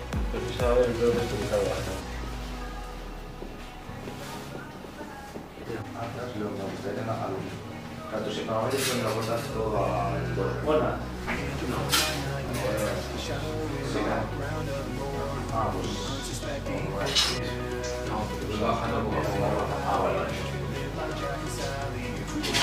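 A brief click with a buzzy edge appears at 12.49 s. It is a repeated buffer: fresh audio failed to reach the output in time, so the device replayed its most recent block, a piece about 2.9 ms long, which fits a 128-sample buffer. That piece plays three times in a row, with a hard join at each repeat. Because each block is so short, the repetition is heard as a tick rather than a stutter, and essentially no audio goes missing.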